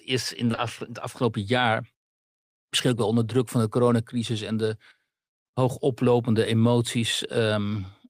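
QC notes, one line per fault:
0.47–0.59 s, short concealed packet loss: three back-to-back 20 ms gaps in the speech at 0.47, 0.51 and 0.55 s, each filled by the receiver extending the preceding sound before blending back, heard as a brief smear or wobble where the real audio is missing.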